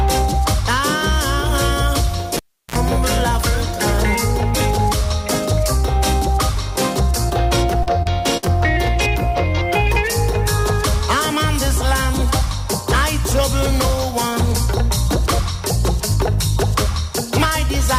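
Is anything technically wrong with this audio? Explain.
Yes. At 2.37 to 2.76 s a cable is pulled and plugged in. A pop is followed by about 340 ms of near silence. Then comes a 50 ms burst of 60 Hz mains buzz while only the tip makes contact. A second pop marks the return of the sound.

Short concealed packet loss occurs at 7.29 s, 7.83 s and 8.03 s. Each time, 20 to 40 ms of audio failed to arrive. The receiver extended the preceding sound to cover the hole, then blended back. Each spot is a brief smear or wobble.

A burst of packet loss follows at 8.37 to 8.45 s. About 60 ms went missing together. The receiver stretched the last sound for roughly 50 ms, fading it out. The audio then jumps forward, with that stretch gone.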